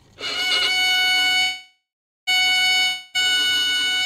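From 1.41 to 2.29 s, packets were likely held up in transit and the jitter buffer ran dry, a call audio freeze. The receiver stretched the last sound into a fading buzz that sinks to silence for about 0.42 s, then resumes where it stopped, now running about 0.86 s late.

From 2.87 to 3.16 s, incoming audio likely stopped arriving, a long network dropout. The last sound is extended as a fading hiss for about 0.27 s, and when the audio returns roughly 0.28 s of it has been skipped and is gone.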